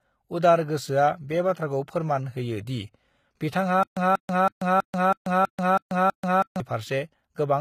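The speech clip was likely squeezed through HE-AAC compression at a low bitrate, around 20 kbps judging by the sound. Its treble is rebuilt from copied lower bands rather than the original, so the damage is plainly audible, the s sounds turn gritty or lispy, and nothing remains above 14.9 kHz. From 3.83 to 6.60 s, a stalled stream likely causes a stutter with silent gaps: the same 188 ms fragment plays 8 times, each followed by 136 ms of silence, every 324 ms, and the audio meant for that stretch is lost.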